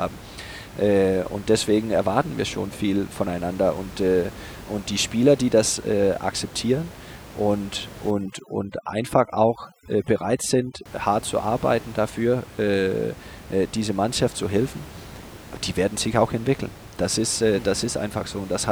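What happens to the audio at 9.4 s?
Overdone noise removal, 8.11 to 10.86 s: heavy suppression mutes bands near the room-noise estimate, leaving speech over a lowered background broken into twinkling specks.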